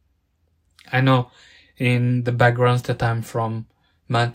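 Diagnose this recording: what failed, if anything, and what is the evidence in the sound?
Nothing failed: the speech recording carries no audible sign of trouble at any stage from capture through playback.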